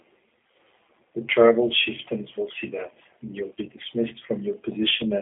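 From start to finish the speech passes through a G.729 codec. The band runs from 250 Hz to 3.4 kHz, with nothing above 3.6 kHz, and the plainly audible roughness fits an 8 kbit/s link. Each 10 ms frame is rebuilt from a vocal tract filter, a pitch predictor and a few pulses, so voicing turns grainy and synthetic. A plain telephone band filter would narrow the sound but leave it smooth; this codec also adds that buzzy texture.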